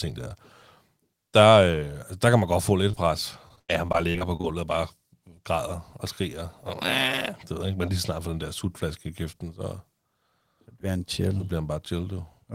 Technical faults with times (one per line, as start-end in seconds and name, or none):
2.91-2.98 short concealed packet loss
3.48-4.45 repeated packet loss (robotic sound)